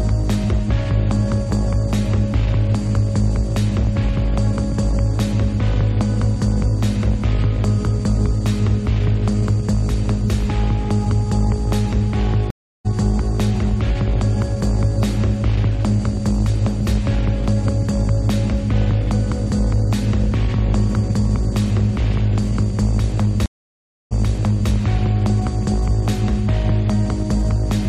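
At 12.50 s a stream reconnect cuts the audio. The connection drops and the player goes silent for 0.34 s. A fresh decoder then picks up mid-stream, roughly a third of a second further on, so a short stretch is skipped. At 23.46 s a second reconnect leaves 0.65 s of silence. This time the server resends a burst, and playback resumes 0.6 s earlier, repeating material. Each restart opens muted or fading in.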